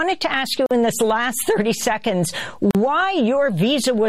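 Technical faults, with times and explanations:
0.66–0.71 s and 2.71–2.75 s, gap at a join of encoded pieces: the sound drops out for about 46 ms and 40 ms, roughly every 2.0 s, then resumes where it stopped. Separately encoded segments were butted together with their encoder delay and end padding left in. On the waveform, a flat silent notch with smeared edges; on the spectrogram, a thin vertical blank band cutting across all frequencies.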